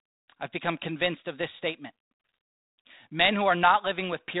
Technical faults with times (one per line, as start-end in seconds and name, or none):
2.96-3.06 bit errors on an ADPCM link